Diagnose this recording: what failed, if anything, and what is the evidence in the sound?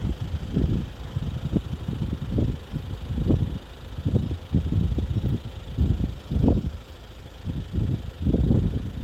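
Nothing failed here: I listened through the whole recording and heard no dropouts, clicks, distortion or glitches at any stage of the chain.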